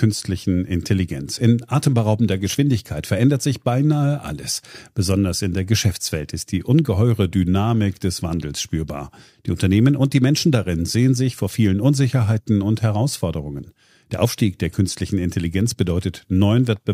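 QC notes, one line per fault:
0.12–16.93 s, clock slip clicks: faint regular ticks about every tenth of a second, roughly 150 in all, clearest on loud sustained speech. Likely two unsynchronised clocks differing by about 200 ppm, so one sample drops or repeats each time.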